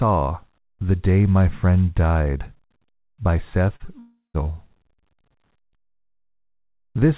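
Short concealed packet loss occurs twice, at 3.76 to 3.82 s and again at 3.86 to 3.89 s. In each case a small run of the call's audio, about 40 ms and then about 20 ms, did not reach the decoder in time. The receiver patched the gaps by extending the preceding sound for roughly 35 ms and 15 ms and blending back into the real signal. Each gap comes across as a brief smear or wobble in the speech.

A long network dropout follows at 3.99 to 4.36 s. Here about 360 ms of speech is missing. What is heard is a stretch of synthetic continuation that fades out, followed by about 160 ms of silence before the real audio resumes, with the lost portion simply gone. The likely cause is the network delivering nothing for that interval. The call path's band limit, with no content above 4 kHz, fits a G.711 A-law codec at 64 kbps.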